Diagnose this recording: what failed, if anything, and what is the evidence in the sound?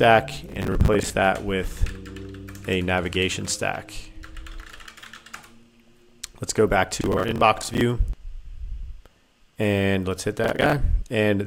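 Processor overload crackle at the buffer stage: gritty tearing at 0.49–1.10, 7.01–7.81 and 10.44–10.73 s, as roughly 10 ms buffers miss deadlines and repeat old audio.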